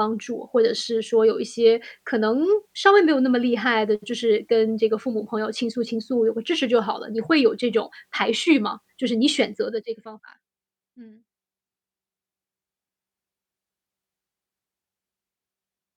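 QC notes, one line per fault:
9.48–10.5 s, zipper noise: the level drops roughly 20 dB in unsmoothed steps, around 50 a second, so each jump clicks and the speech picks up a buzzy tick.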